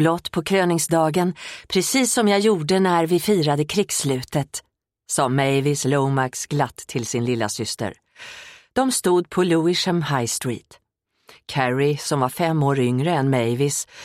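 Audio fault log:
No fault to log.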